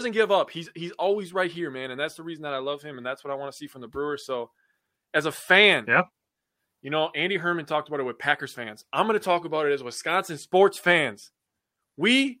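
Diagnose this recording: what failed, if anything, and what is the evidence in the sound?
Nothing failed: the recording gives no evidence in the sound of a fault at any stage.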